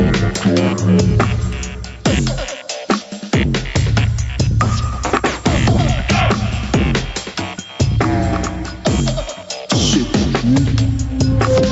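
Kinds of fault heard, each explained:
Gain pumping: The level is pulled down under each loud sound, swinging by about 5 dB. The likely cause is excess gain caught by a fast limiter.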